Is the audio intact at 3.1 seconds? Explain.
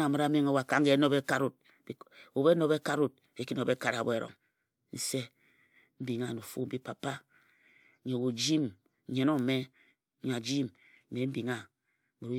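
Yes, the speech at 3.1 seconds is intact, with no dropout, click, distortion or other fault audible at that point.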